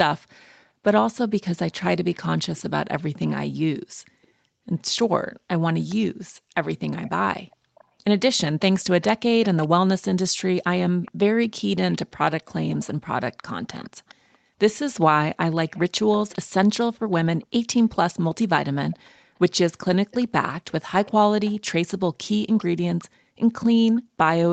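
Speech, with a faint repeat of the voice trailing about 413 ms behind it. This is echo leak, heard from 2.13 to 4.27 s, at 5.89 to 5.95 s, from 6.96 to 7.84 s, from 9.01 to 12.88 s, and from 13.8 s to the end. The echo sits well below the speech. The likely cause is a far-end loudspeaker whose echo canceller let some of the returning audio through.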